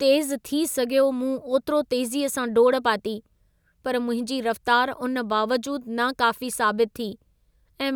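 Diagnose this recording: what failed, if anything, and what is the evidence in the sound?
Nothing failed in this recording.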